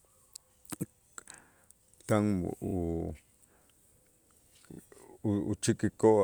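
At 2.67 to 2.74 s and again at 4.72 to 4.79 s, the speech stutters from repeated frames: a single 32 ms block of compressed audio is decoded twice more, replaying the same fragment and lengthening the clip by 64 ms at each point.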